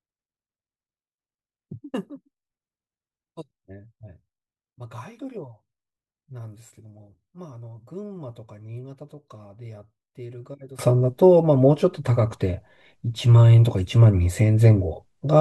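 From 0.0 to 10.79 s the speech sits about 20 dB down and sounds faint, likely from one channel inverted, cancelling shared content when summed to mono. The waveform looks shrunken, and the spectrogram appears faint until level returns.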